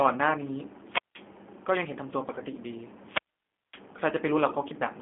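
Throughout, the speech has passed through the G.729 codec, whose narrow, rough sound fits an 8 kbit/s link. The voice is rebuilt from a filter, pitch predictor and a few pulses per frame, so it sounds plainly synthetic and grainy, confined to roughly 250 Hz to 3.5 kHz.

At 2.35 s and again at 4.48 s, VoIP packet loss concealed by the speech codec appears. Each time about 20 ms of audio, which fits one lost packet, is replaced by the decoder stretching its last frame. This produces a brief smear lasting about 50 ms before the voice recovers.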